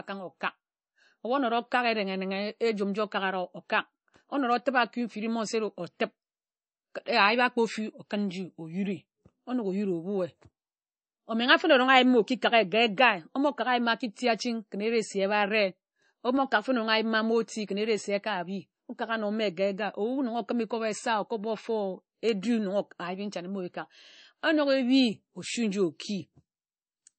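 Throughout the speech, nothing sounds above 8.3 kHz and plainly audible watery swirl accompanies it, likely MP3 compression at a bitrate near 32 kbps; plain low-pass filtering wouldn't swirl.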